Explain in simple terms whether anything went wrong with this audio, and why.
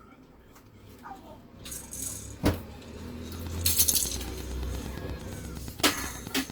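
From 3.35 s to the end at 6.51 s, a steady ticking of about 30 clicks (8.6 per second) runs over the sound. This train of clicks is likely interference or a faulty connection or power supply.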